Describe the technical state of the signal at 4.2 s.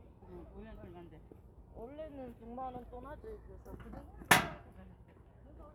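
At 4.2 s the audio is intact, with no dropout, distortion or other technical fault.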